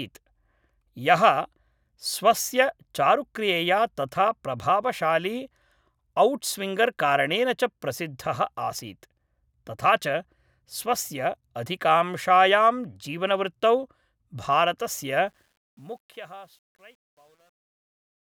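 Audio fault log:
15.27 to 18.29 s, truncation distortion on a fade: the speech fades out from about 15.3 s to 18.3 s, but the fade's gain stage seems to keep only 10 bits and adds no dither, so as the level drops the waveform gets chopped into a handful of coarse steps. From 15.96 s to the end it's at its worst, with the tail turning gritty rather than trailing off cleanly.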